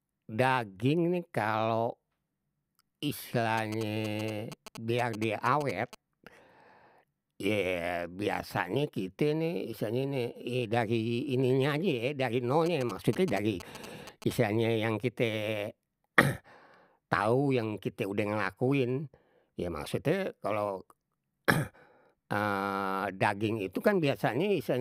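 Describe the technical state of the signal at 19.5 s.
At 19.5 s the speech signal is intact, with no audible technical fault at that point.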